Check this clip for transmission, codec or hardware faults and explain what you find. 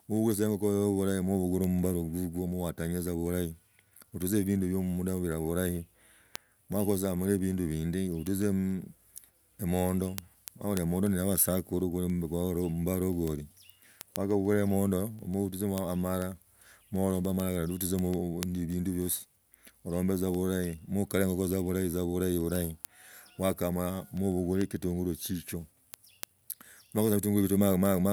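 One fault is present.

Word clock ticks, 0.17 to 28.0 s: the receiving clock runs unlocked, drifting roughly 150 ppm, slipping one sample about every 0.15 s, so steady sharp ticks run through the speech.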